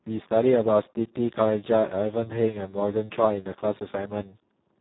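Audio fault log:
Throughout, Speex codec: the speech sounds heavily damaged, hoarse and noisy, with nothing above 3.9 kHz. With so few bits for the excitation, this CELP coder cannot rebuild the voice's fine structure, which fits a bitrate near 4 kbps.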